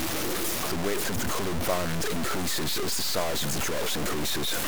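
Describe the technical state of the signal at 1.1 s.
At 1.1 s the speech carries the low bit depth without dither heard across the whole clip. The sound is coarse and grainy, with distortion that rises and falls with the speech and a noise floor only a few decibels below the signal. Quieter stretches break into sputtering or gaps. This likely comes from truncation to very few levels, around 3 bits, with no dither, so the error stays locked to the waveform.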